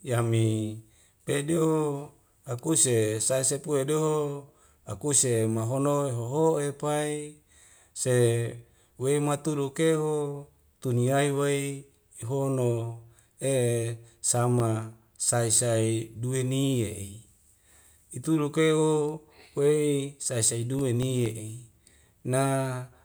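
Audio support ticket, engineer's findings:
CD scratch ticks, speech, 13.90–15.07 s (6 ticks) and 20.33–22.19 s (9 ticks). Regular ticks about five per second, the longest about 3 ms, of uneven strength. Probable component: disc/read path. A surface blemish exceeds error correction once per revolution, so the player interpolates or mutes the damaged samples. Unlike vinyl crackle or random digital clicks, spacing stays metronomic, tied to disc rotation, and strength varies from tick to tick.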